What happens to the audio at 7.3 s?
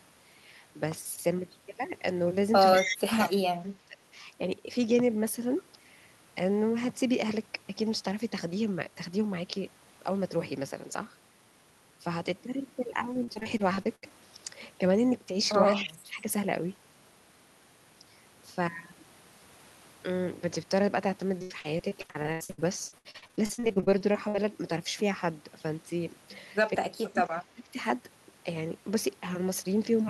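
Nothing goes wrong at 7.3 s; the speech carries on intact through that moment, with no dropout, click, distortion or other fault to be heard.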